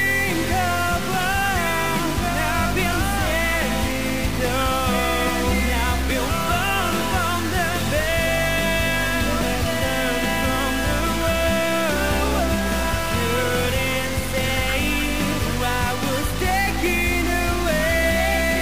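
From start to finish, harsh buzzy distortion rides on the sound, and quiet gaps fill with noise near -25 dBFS. This is likely a stuck bit.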